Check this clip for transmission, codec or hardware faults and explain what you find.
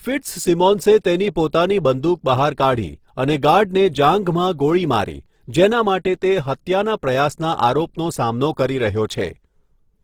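One codec fault is present, and it lasts the whole clip.

Throughout the speech, there is Opus compression, likely in its CELT music mode at a low rate, which fits about 16 kbps. Band energies survive, but sparse bits leave detail filled with folded or noise content. Tones sound plainly rough, noisy and grainy. Bandwidth stays full, reaching 20.3 kHz.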